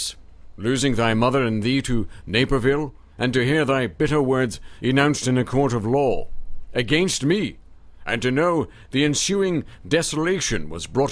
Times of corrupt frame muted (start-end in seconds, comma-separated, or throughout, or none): none